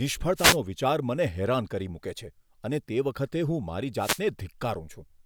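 At 0.35 s a wireless microphone noise hit breaks into the speech. It lasts until 0.58 s. A second one runs from 3.96 s to 4.23 s. Each is a brief swish of static. The cause is the analogue FM radio link fading as reflected signals cancel the direct one. With the signal weakened, receiver noise rises. For roughly a quarter of a second, that hiss sits over the speech.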